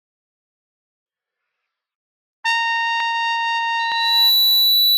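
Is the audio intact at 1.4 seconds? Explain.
Yes, at 1.4 seconds the sound runs on intact, with no dropout, click, distortion or other audible fault at that moment.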